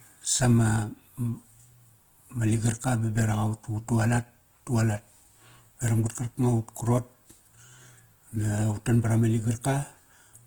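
From start to finish the speech carries plainly audible Opus compression damage, likely from the encoder running in its CELT music mode at a low rate, which fits something around 16 kbps. With so few bits, the band energies are held but the fine detail inside each band gets patched in by folding or noise. The voice comes across grainy and rough rather than swirly, even though content still reaches up to about 20.1 kHz.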